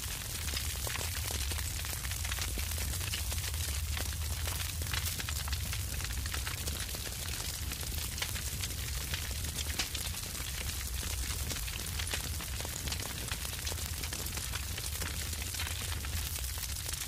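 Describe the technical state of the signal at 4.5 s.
At 4.5 s the signal carries word clock ticks, present from 0.15 s to 17.07 s. The receiver's clock is unlocked and drifts against the source by roughly 100 ppm, so a single sample is slipped about every 0.2 s, heard as steady, sharp clicks of uneven strength.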